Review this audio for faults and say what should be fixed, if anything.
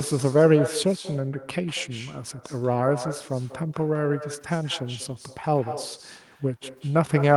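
The far end is playing the call through a loudspeaker, and its microphone captures that playback without any echo canceller removing it, so the talker's own speech returns after the network round trip. This echo with no canceller runs throughout the clip: every phrase is followed roughly a fifth of a second later by a copy about 12 dB quieter and thinner than the original. To prevent it, enable acoustic echo cancellation on the far-end device, or have that participant use a headset.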